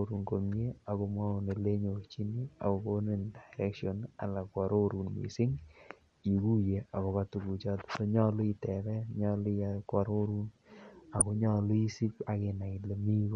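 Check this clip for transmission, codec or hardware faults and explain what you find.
Two faults stand out in this speech clip: codec damage throughout and a short burst of DAB burbling near the end.

MP2 compression is plainly audible from start to finish. The sound is dull and has a granular, gurgling edge. This is likely MPEG Layer II coding starved of bits, at a rate around 80 kbps. The coder splits the signal into 32 sub-bands and shares out bits. With too few, upper bands drop out and flicker, and the remaining bands are quantised coarsely.

DAB burbling appears from 11.19 to 11.22 s. It is a brief burst of burbling laid over the speech. Bit errors slipped past the error correction into the MP2 data, at a rate in the low fractions of a percent. Corrupted samples put short blips of noise into single sub-bands, and corrupted scale factors make sub-bands jump in level for up to a frame. 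Five frames were damaged.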